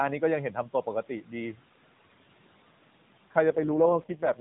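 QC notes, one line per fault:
3.50–4.40 s, AMR rate drop: the sound turns buzzier and more synthetic with no gap, which fits the codec falling from its 12.2 kbps mode to 4.75 kbps; on a spectrogram the 4 kHz ceiling holds while harmonic striations blur.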